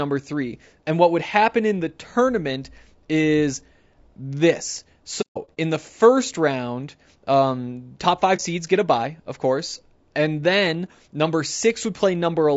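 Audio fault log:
throughout, low-delay AAC compression: the sound is rough and grainy, likely from low-delay AAC coding at a rate around 32 kbps. Coarse coding at this low rate leaves noise, so a spectrogram shows noise filling the gaps between the harmonics, and a thin, synthetic-looking top band.
5.21–5.57 s and 8.36–8.41 s, AAC frame loss with muting: lost frames were decoded as silence, leaving soft-edged holes. The first span holds scattered gaps, the longest about 150 ms; the second is a single brief dropout. The waveform tapers to flat and back, and the spectrogram shows blank vertical columns.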